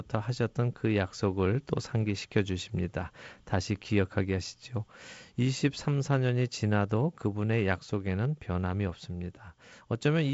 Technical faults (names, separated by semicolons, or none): none